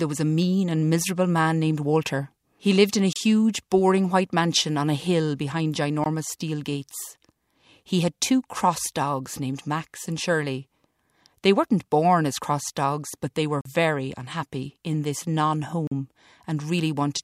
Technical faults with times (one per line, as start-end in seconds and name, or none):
3.13-3.16 block of digital silence
6.04 block of digital silence
13.61-13.65 block of digital silence
15.87-15.91 block of digital silence